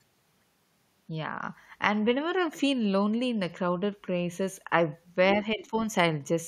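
From 5.34 to 5.72 s, the echo canceller likely mistook simultaneous talking for echo, causing speech suppressed in double talk: the voice dips by around 10 dB in patches totalling about 150 ms. Between 5.59 and 5.65 s, the canceller likely fails to remove the loudspeaker signal, and the other side's voice leaks through as a faint scrap well below the talker.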